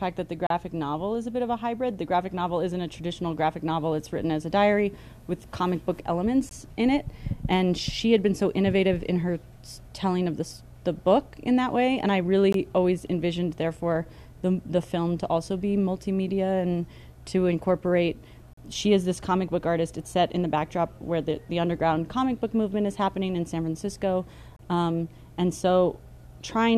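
Gaps between stream segments land at 0.47–0.50, 6.49, 12.53, 18.53–18.57 and 24.56–24.59 s, one every 6 s. Mismatched segment timestamps leave 18–40 ms hard-edged silent holes in the sound.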